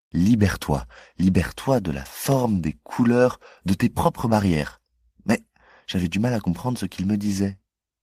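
Speech recording with no audible technical faults.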